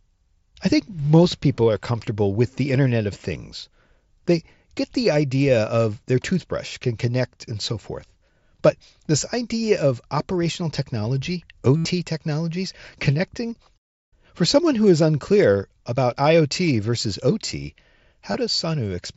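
At 11.76 to 11.85 s, between "idea of operational technology" and "technologies connecting", concealed Bluetooth headset packet loss fills about 82 ms, which points to a run of around eleven lost frames. The receiver keeps repeating the best-matching recent stretch of waveform, giving a buzzy tone held at full level, then a brief warble as real audio resumes through the mSBC link. A second, 15 ms loss at 18.33 s covers two lost frames.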